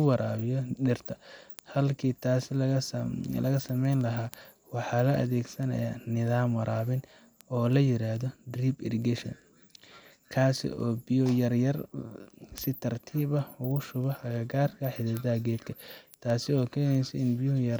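Word clock ticks run through this speech clip from 0.14 s to 17.76 s, a steady train of sharp, unevenly strong clicks repeating about every 0.15 s, around a hundred in all. The receiving device is running on its own clock rather than locking to the digital input, and the two rates differ by something like 150 parts per million. Each time they slip past one another, a single sample is dropped or doubled and a few neighbours are misread, producing one tick.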